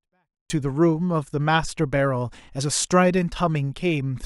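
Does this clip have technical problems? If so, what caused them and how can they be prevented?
Yes. From 0.0 to 0.5 s, a 24-bit alignment error (too quiet) drops the speech about 48 dB: low-byte 24-bit samples were read as 32-bit. Declare the container's sample justification correctly when converting.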